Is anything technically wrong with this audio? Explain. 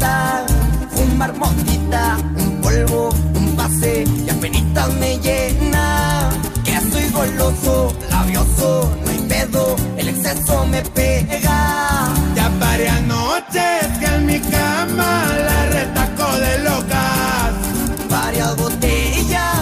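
Yes. From 6.58 to 9.57 s there is sample clock jitter. The converter's clock wanders by around a microsecond, so samples land slightly early or late, and the error is worst where the waveform changes fastest. That adds a grainy hiss about 35 dB below the sound, heaviest on loud, bright passages.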